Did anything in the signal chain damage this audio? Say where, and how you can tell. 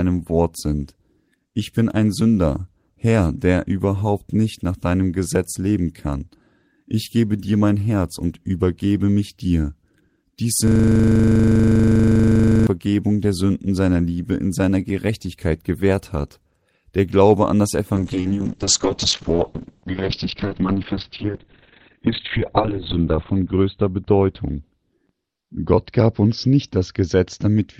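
Yes. From 10.67 s to 12.67 s the speech gives way to a steady, rasping buzz at about 25 Hz: one 40 ms fragment repeats exactly, about 50 times in a row. That is a system hang loop at the driver or buffer stage. The host or driver stalled while the audio hardware kept replaying the same ring buffer, and a 40 ms loop fits a buffer of that length cycling unchanged.

Right after "an das", at 17.96 s, the sound turns muffled and rough and stays that way to the end. The top of the spectrum falls from 20 kHz to about 4 kHz, and the texture becomes coarse and watery, worst for about 4.5 s. This is a call bitrate drop in call processing: the bandwidth estimate fell, so the encoder went from 32 to 8 kbps, coding more coarsely and cutting off the high frequencies.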